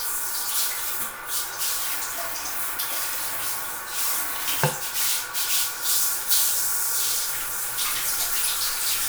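Nothing in this recording of everyday sounds stood out as a technical fault on listening.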